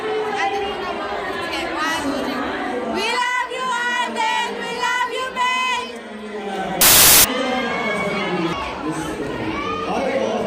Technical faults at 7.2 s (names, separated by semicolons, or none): samples built from the wrong bytes